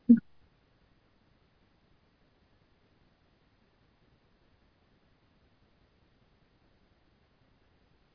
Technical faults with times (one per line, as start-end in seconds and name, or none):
none